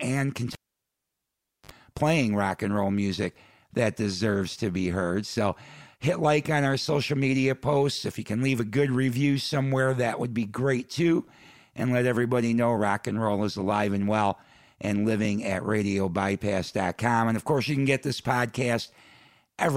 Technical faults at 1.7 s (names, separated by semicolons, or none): cable pulled and plugged in